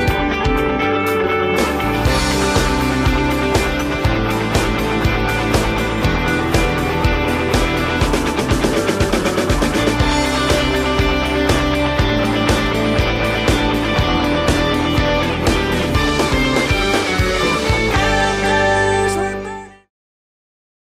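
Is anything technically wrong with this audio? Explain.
No, nothing is technically wrong with this audio.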